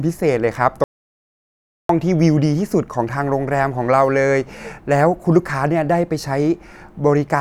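At 0.84 s the speech cuts out abruptly in mid-flow and the track falls to silence until 1.89 s, a gap of about 1.05 s. This is an audio dropout to silence, likely from the input being lost while the recorder kept writing silence. What separates it from a natural pause or a noise gate is that the room tone vanishes entirely and both edges are hard, so the speech in between is simply gone.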